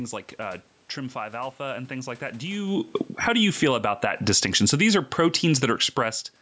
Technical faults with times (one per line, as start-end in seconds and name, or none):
2.45-6.15 automatic gain falling
3.87-5.34 automatic gain rising